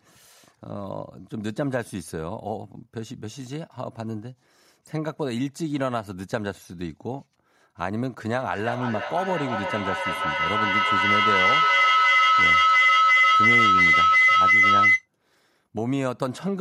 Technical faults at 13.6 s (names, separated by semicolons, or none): feedback howl